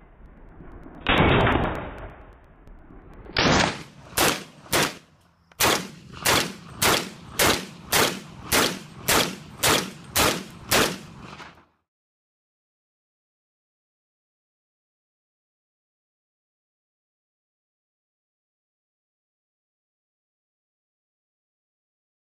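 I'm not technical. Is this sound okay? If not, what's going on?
No. Something in the playback or recording system kept interrupting the USB connection or the audio driver at a steady beat, every 0.115 s, about nine times a second, from 0.14 s to 22.12 s. Each time, roughly a hundredth of a second of sound was simply skipped. These periodic USB or driver dropouts come around two hundred times, and you hear them as regular ticks or pops wherever there is sound.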